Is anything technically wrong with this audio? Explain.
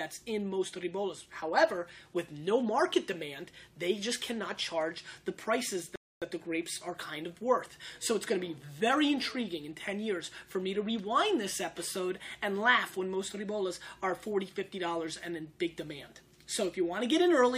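Yes, there's a rebuffering stall from about 5.96 to 6.22 s. The player ran dry of downloaded audio and waited for more. You hear a clean cut to silence, then it resumes exactly where it stopped, with nothing missing but roughly 261 ms added.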